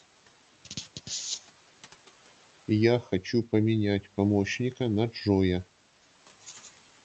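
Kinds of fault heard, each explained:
Speech cut by the noise suppressor: the suppressor took speech for noise. From 3.02 to 3.26 s, parts drop up to about 8 dB, sounding swallowed.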